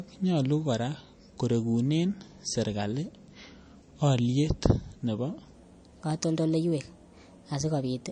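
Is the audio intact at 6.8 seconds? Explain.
No. From 5.54 s to the end at 8.12 s, the speech runs about 1.21 times too fast, a section at the wrong speed, likely from playback against a mismatched clock. Pitch rises by roughly three semitones along with the tempo, which separates it from a pitch shift that would leave timing unchanged.

Throughout the clip, including this moment, there is swirly, watery smearing and a dulled top end typical of a heavily compressed MP3, likely low-bitrate audio saved at a high bitrate. The sound fits an encode near 34 kbit/s, later resaved at a higher rate that could not restore the lost detail.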